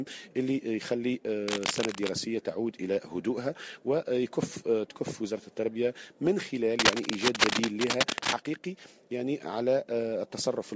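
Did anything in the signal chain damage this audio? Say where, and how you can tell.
Yes. Cable scratch noise in the analogue wiring damages the audio at 1.48 to 2.10 s and again at 6.76 to 8.33 s. Each stretch carries dense, irregular bursts of scratchy, rustling noise, roughly as loud as the audio in the first and somewhat louder in the second. The likely cause is a worn cable, connector or control being moved, so its contact resistance jumps rapidly. The scratching still sits inside the call path's band limit at 8 kHz.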